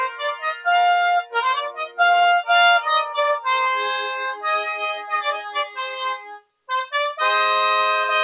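A noise suppressor built for speech was left running on non-speech sound, so it treats sustained tones and decays as noise, making levels swing by around 10 dB and pump. The sound cut by the noise suppressor drops most clearly at 0.09–0.66 s (about 10 dB), 1.69–1.99 s (about 15 dB), 4.69–5.13 s (about 8 dB), 5.33–6.0 s (about 12 dB) and 6.16–6.52 s (about 20 dB), where held sound sinks and tails cut short. All of this arrives through a band-limited call path with nothing above 4 kHz, consistent with 64 kbps G.711 A-law.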